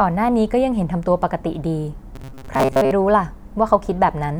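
From 2.16 to 2.93 s the speech turns into robotic sound from repeated short buffers: a rigid, metallic buzz near 134 Hz that only loosely follows the speech. This likely comes from late audio being covered by looping a roughly 7.5 ms slice, so about half the material goes missing. Unlike codec warble, the pitch stays locked instead of drifting.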